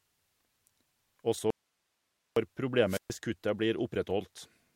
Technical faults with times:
1.50-2.36 audio dropout to a faint residue
2.87-3.11 wireless microphone squelch dropout

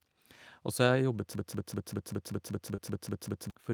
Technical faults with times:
1.35-3.50 broken-record loop
2.75-2.80 short concealed packet loss

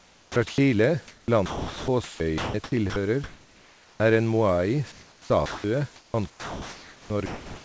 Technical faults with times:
0.00-0.58 sound chopped by the voice detector
1.08-2.96 sound chopped by the voice detector
3.24-4.00 comfort noise in place of the background
3.97-4.00 onset clipped by the voice detector
4.92-5.64 comfort noise in place of the background
5.46-5.64 sound dropped by the voice detector
5.96-7.65 sound chopped by the voice detector

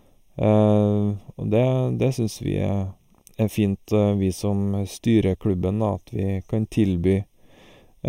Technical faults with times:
0.00-8.09 channel delay (comb filtering)

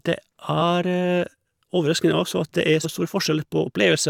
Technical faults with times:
2.83 damaged data in a compressed stream

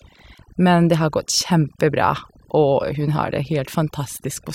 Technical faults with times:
0.00-4.54 overdone noise removal

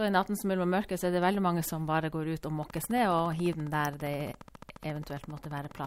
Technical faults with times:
2.63-5.86 train of clicks

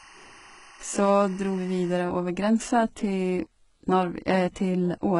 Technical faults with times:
0.00-5.19 HE-AAC compression
0.00-2.00 timecode bleed

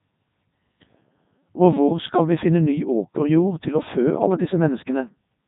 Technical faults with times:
0.00-5.47 Codec 2 vocoder

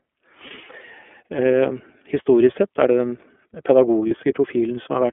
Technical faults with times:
0.00-5.12 iLBC codec
0.47-0.52 lost iLBC frames
4.08-4.12 lost iLBC frames

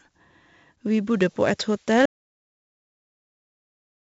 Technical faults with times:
0.00-4.11 4-bit ADPCM compression
2.06-4.11 audio dropout to silence

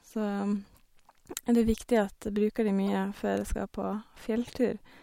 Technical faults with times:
1.44-1.48 corrupt frame decoded
2.87 corrupt frame decoded
4.45-4.49 corrupt frame decoded

